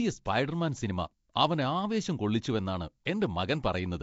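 A speech recording that was likely passed through Nellymoser compression, the old Flash microphone codec, which codes short blocks at a fixed, low bit depth and fills starved bands with noise. The damage is plainly audible across the whole clip: a rough, hissy halo surrounds the speech, with a smeared, underwater quality. Nothing is present above 7.7 kHz, and the overall coarseness fits a rate around 32 kbps.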